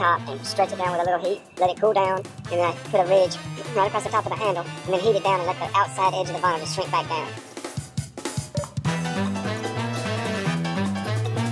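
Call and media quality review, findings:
Wrong sample rate, whole clip. Audio runs 1.5 times fast, pitch raised about 7 semitones, everything high and hurried. Probable component: playback clock or resampler config. Samples played unconverted at a higher rate, which fits 16 kHz material output at 24 kHz.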